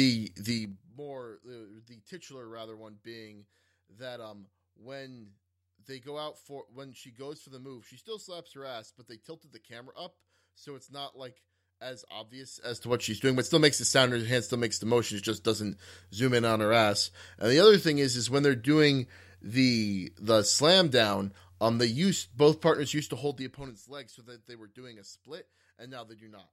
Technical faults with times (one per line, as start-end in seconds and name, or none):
0.48-0.96 zipper noise
12.48-12.96 zipper noise
22.92-23.92 zipper noise